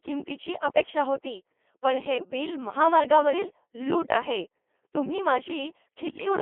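This speech clip runs through a Codec 2 vocoder, with a 300 Hz to 3.4 kHz band and heavy damage that fits a rate near 2.4 kbit/s, so the voice is rebuilt from sine waves and sounds robotic and buzzy. From 6.10 to 6.26 s, bit errors on digital voice radio, at a rate of a few percent, corrupt what sounds like a handful of frames, throwing pitch, level and tone into warbling gibberish.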